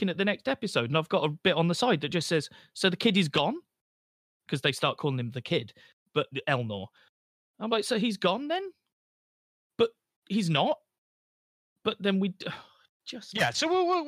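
No technical faults are audible anywhere in this speech recording.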